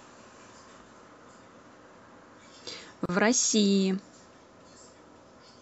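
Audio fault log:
3.06 to 3.09 s, gap at a join of encoded pieces: the speech was encoded as separate pieces and spliced back together without trimming, so the encoder's start-up delay on one piece and the padded final frame of the other both stayed in at the seam. The result is a hole of about 35 ms cut into continuous speech, with edges smeared by the codec, after which the speech resumes exactly where it left off.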